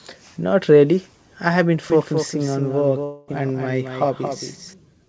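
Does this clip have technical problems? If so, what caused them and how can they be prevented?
Yes. From 1.9 to 4.74 s, just after "really I have been", there is a doubled audio track. A full-band copy about 5 dB quieter runs about a fifth of a second behind. It has no room colour and starts and stops abruptly. The likely cause is a second, slower capture path or an edit that left two misaligned copies. To prevent it, route the source through only one path and check edits for stacked duplicates.

From 3.04 to 3.30 s, there is a long network dropout. About 240 ms of audio never arrives. The receiver fills the gap with a fading buzz carried over from the last sound. The sound then resumes without the lost part. The likely cause is a burst of lost or late packets. To prevent it, use a more stable connection and allow more jitter-buffer headroom.

The call path's G.722 codec carries nothing above 8 kHz.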